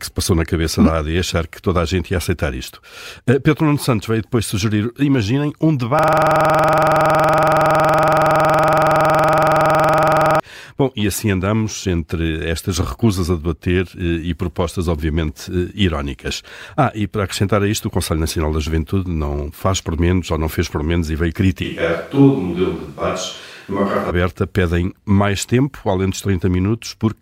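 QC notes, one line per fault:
5.99–10.40 s, system hang loop: the system froze just after "depois sugerir imaginem um" while the audio hardware kept replaying the same 46.44 ms of its ring buffer, which fits a 2048-sample buffer. That fragment repeats about 95 times, so the sound becomes a rigid 21.5 Hz buzz.
21.65–24.09 s, switch to a distant microphone: after "por menos e veio" the sound suddenly turns roomy and hollow with thinner bass, and it snaps back before "aberta pedem mais". The close microphone likely dropped out, leaving a farther pickup. Level barely changes, with room noise roughly 35 dB under the speech.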